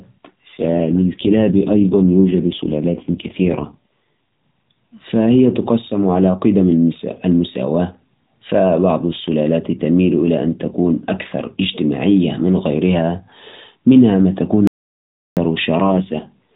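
AMR rate drop from 0.48 to 3.76 s: the AMR narrowband speech turns rougher and more synthetic at the same 4 kHz band with no gap, which fits the codec stepping down from 12.2 to about 4.75 kbps on a weak link. Audio dropout to silence from 14.67 to 15.37 s: about 0.69 s of speech cuts out to silence with no room tone, most likely from a lost input or link. A second AMR rate drop runs from 15.84 s to the end, bringing back the same buzzy, synthetic roughness.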